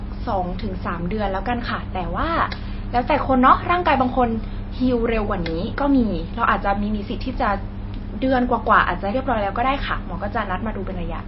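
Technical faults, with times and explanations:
Throughout, MP3 compression: the speech stops dead above 5.6 kHz and sounds watery, likely an encoder starved of bits, consistent with roughly 24 kbps.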